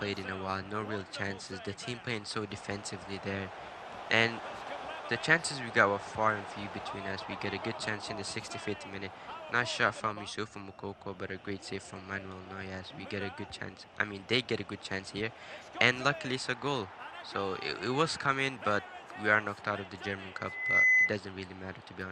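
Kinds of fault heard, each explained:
Loudspeaker feedback squeal: a 2 kHz tone swells over roughly 0.4 seconds to about 10 dB above the sound, as the microphone re-amplifies its own loudspeaker output.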